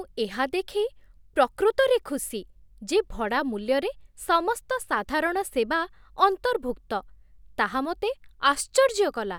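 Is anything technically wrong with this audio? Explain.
No, nothing is technically wrong with this audio.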